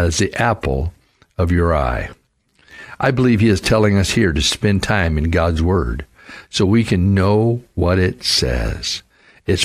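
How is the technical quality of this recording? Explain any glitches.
No glitches can be heard anywhere in the speech recording, and the signal stays technically intact throughout.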